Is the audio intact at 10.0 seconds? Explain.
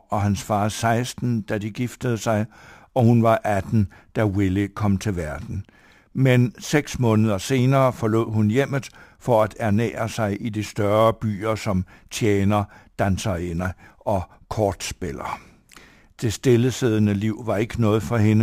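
No. At 10.0 seconds, as across the whole clip, the speech carries a faint hiss and graininess that thickens on loud passages and bright consonants and drops away in the pauses. This is sample clock jitter: the converter's clock wanders by a few microseconds, around 7, so each sample is captured slightly off time. Steep, fast-moving parts of the waveform turn that timing error into noise roughly 30 dB below the signal.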